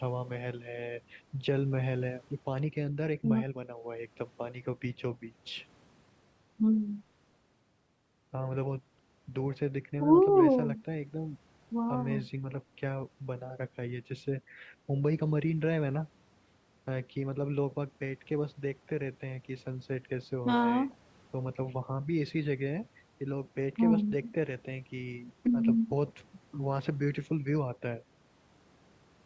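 Nothing stood out on listening to this speech recording, which shows only the usual effects of a call microphone path: the lowest bass is trimmed and nothing sits above 8 kHz.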